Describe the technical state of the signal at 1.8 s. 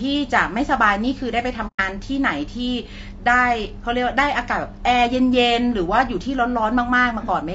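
AAC frame loss with muting spans 1.67 to 1.80 s, so 1.8 s is the moment the sound returns. About 120 ms was replaced with silence, which fits four lost frames, and overlapping windows soften the speech's fade out and back in. The speech is rough and grainy throughout, with noise between the harmonics, likely from low-delay AAC compression such as AAC-ELD at a rate that fits around 32 kbps.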